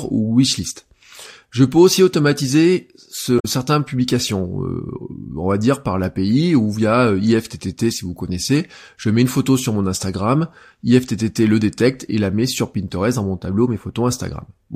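Speech, with damaged data in a compressed stream from 3.36 to 3.45 s. The decoder misreads corrupted frames and resyncs, producing a brief glitch.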